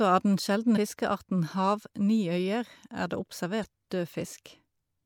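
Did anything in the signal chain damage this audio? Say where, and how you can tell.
Yes, damaged data in a compressed stream at the codec stage: corrupted bytes made the decoder misread frames and lose sync while hunting for the next valid header. The speech breaks into a brief glitch at 0.73 to 0.77 s and again at 3.63 to 3.65 s.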